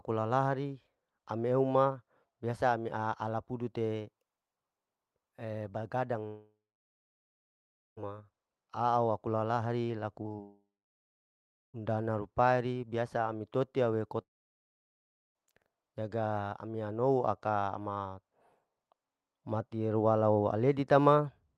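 A speech recording carried over a call link whose Opus coding band-limits it to about 12 kHz, with a character that fits a bitrate near 32 kbps. It has three long network dropouts, at 6.27 to 7.99 s (returning on "ma au"), 10.42 to 11.76 s (returning on "rupaeri biasa ami totia") and 14.22 to 15.37 s (between "biasa ami totia we" and "jaga ami anouho aka"). In each, the last sound smears briefly, fades, and leaves over a second of near silence, 1.4 s in the first case, before speech resumes with that stretch gone. This is likely a network outage. A single long fade into silence sets these apart from packet-loss chatter. That chatter, repeated packet loss with a robotic sound, occurs just before the second dropout, from 10.23 to 10.40 s. Four short holes, the longest about 19 ms, are each patched by extending the previous sound, so nearly half that span is synthetic. The result is choppy rather than silent, because the gaps are too short and close together to fade out.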